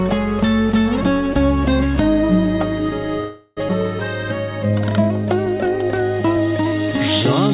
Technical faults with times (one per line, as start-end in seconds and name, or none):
3.20-3.59 call audio freeze
3.69-3.71 skip ahead
4.52-6.88 jitter buffer slow-down